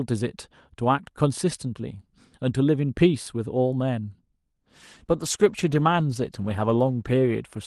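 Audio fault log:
4.63–7.66 s call bitrate drop: from 4.63 s to the end the speech turns rough and watery. The bitrate stays at its lowest for about 2.5 s, which fits the encoder falling from around 64 kbps to about 15 kbps after the call's bandwidth estimate dropped. With far fewer bits, the codec quantises the spectrum much more coarsely. On a spectrogram, the detail in the top of the band that reached 12 kHz before the drop turns patchy and smeared.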